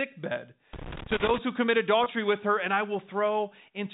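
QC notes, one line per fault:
0.73–1.38 s, loose connector crackle: just before "who commit", an irregular burst of scratching and crackle lasts about 0.65 s. A worn or dirty contact is making and breaking as it moves, chopping the signal on and off at random. On a waveform this shows as jagged dropouts and sharp spikes scattered through the passage. A spectrogram shows ragged vertical streaks across the whole band, which here stops near 4 kHz because of the telephone-band G.711 path.
2.04–2.06 s, packet loss with pitch repetition: between "who commit" and "with her and I", roughly 20 ms of audio went missing, which fits a single lost packet. The receiver filled the gap by repeating the last pitch period, so the sound briefly holds on a slightly buzzy, frozen tone before normal audio resumes. A waveform shows identical cycles repeating in a short run. A spectrogram shows harmonics that stay flat and unchanging instead of moving for that instant.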